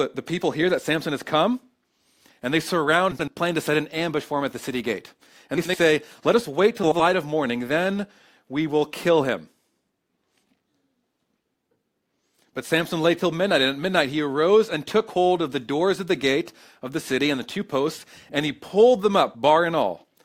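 At 3.11 to 3.30 s, 5.57 to 5.77 s and 6.83 to 7.01 s the speech breaks into a brief garbled flutter: frames out of order, where two adjacent blocks of about 80 ms, fitting runs of four frames each, were decoded swapped. Unlike a dropout or a stutter, nothing is missing or repeated, and the timing afterwards stays intact; the sound is simply rearranged.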